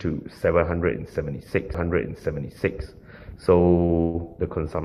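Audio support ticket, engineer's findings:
CD skip at 1.74 s: tick and a brief mute of a few ms, then playback picks up from a different spot. The laser jumped tracks on the disc spiral.

Short stall from a late packet, 3.85 to 3.92 s: the last sound is held about 35 ms while the jitter buffer sits empty. It resumes in place with nothing lost and 35 ms of added delay.

Call audio freeze, 4.01 to 4.17 s: sound stretched into a fading buzz for 132 ms, no silence. Likely delayed packets drained the jitter buffer. It resumes where it stopped with nothing lost and 132 ms of added delay.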